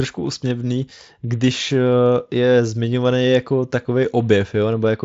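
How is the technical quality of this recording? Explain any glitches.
No glitches or technical faults are audible in this recording.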